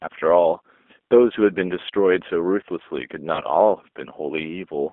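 Throughout the clip the speech carries the sound of the G.729 codec, a low-rate VoIP coder running at 8 kbit/s that rebuilds each short frame from a vocal tract filter, a pitch predictor and a few sparse pulses. The result is plainly audible: the voice is intelligible but rough and slightly synthetic. On a spectrogram the energy sits inside a narrow line band of about 250 Hz to 3.5 kHz, with nothing above, and the harmonics look smeared.

From 3.35 to 3.42 s there is VoIP packet loss concealed by the speech codec. About 30 ms of audio went missing, which fits a single lost packet. The decoder filled the gap by extending its last pitch and filter settings at falling gain, so the sound briefly stretches into a buzzy tone or coloured noise that fades. Because each frame builds on the one before, the speech stays weak or distorted after the gap. A spectrogram shows the stretched sound dimming across the gap, and the waveform shows its amplitude shrinking.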